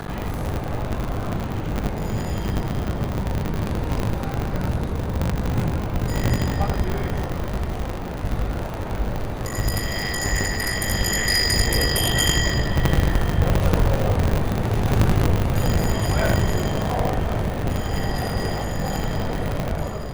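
Buffer tearing runs through the whole recording, heard as a steady robotic buzz at 50 Hz that is present whenever there is signal and drops away in silence. The writing side and the hardware reading side of the ring buffer have drifted into each other, so every period, which fits a 20 ms cycle, is spliced. Roughly two fifths of each period carries audio about 70 ms stale, butted against current material with hard joins at both edges.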